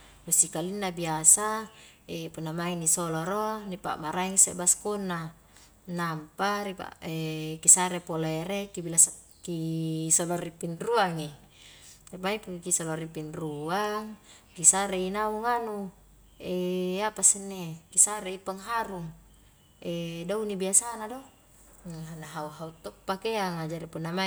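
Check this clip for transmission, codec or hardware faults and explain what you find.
Nothing in this recording points to a fault anywhere along its path. The speech comes through with nothing that calls for explanation.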